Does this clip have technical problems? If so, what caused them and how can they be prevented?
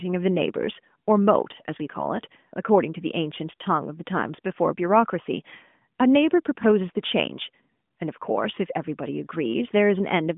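No, the speech shows no technical problems; it carries the narrow telephone bandwidth of a mobile call, with nothing above about 3.7 kHz, consistent with the AMR narrowband codec at its top 12.2 kbps mode, so nothing needs preventing.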